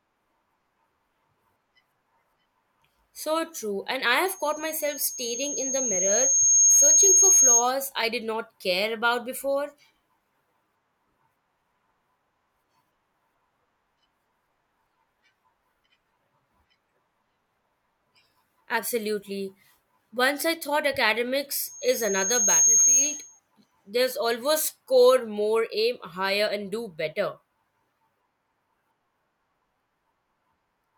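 A piercing 6.5 kHz tone rises out of the speech from 4.26 s to 7.71 s, swelling over roughly two seconds to sit about 10 dB above the voice, and returns from 21.62 s to 23.40 s, climbing faster, in about a second. This is loudspeaker feedback squeal: the microphone hears the loudspeaker it drives, and at 6.5 kHz the loop gain tops one, so that frequency keeps reinforcing itself until the loop is broken.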